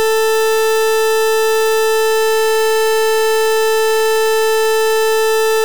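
From start to finish the music sounds brutally loud and harsh, its waveform flattened into a near-square shape sitting at an almost fixed, high level, with quiet background noise pushed up to the same level as the music itself, though the pitch can still be followed. This is float read as integer: the samples were likely stored as 32-bit float but interpreted as 32-bit integers, so sign and exponent bits dictate the level.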